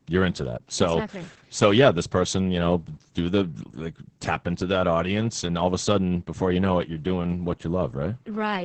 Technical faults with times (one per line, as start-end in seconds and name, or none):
0.00-8.64 Opus voice compression